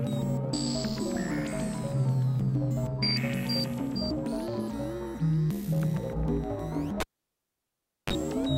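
Cable pulled and plugged in from 7.00 to 8.13 s: a pop, about 1.08 s of near silence, a 32 ms burst of 50 Hz mains buzz, then another pop.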